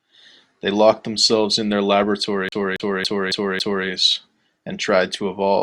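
From 2.49 s to 3.87 s the speech falls into a CD stuck on one turn: a scratch throws the laser back one track each rotation, so the same 0.28 s of audio plays five times, with a brief mute at every jump. What sets it apart from a network or buffer repeat is the strict regularity. The loop length never varies and the stutter ticks along at an even, fast rate, like a skipping disc.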